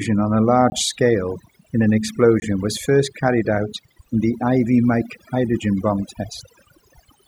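Overdone noise removal runs through the whole recording. The noise reduction was pushed too hard: every frequency band that came close to its noise estimate was pulled far down or switched off, and the quieter parts of the speech went with them. Between phrases the background falls to near silence scattered with twinkling specks, while the voice has its softer detail stripped away.

A block of digital silence falls at 0.70–0.72 s, right after "on a" and before "scale in an", and a second at 2.40–2.42 s, after "scale in an" and before "was first carried out". Each is a 20 ms gap, the kind left when the output buffer wasn't filled in time. The signal drops straight to digital silence and returns with no fade, and each gap is heard as a brief hole.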